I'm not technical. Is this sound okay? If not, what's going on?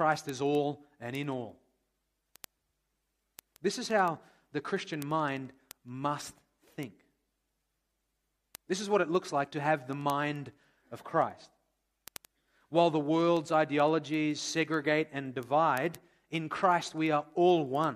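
No. Two pieces of equipment passing the speech along were running on slightly different clocks, about 300 parts per million apart, causing word clock ticks: sharp clicks roughly ten times a second, of uneven strength, from 0.12 s to 17.92 s.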